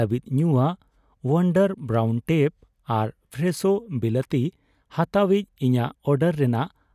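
No technical faults can be heard anywhere in the speech recording.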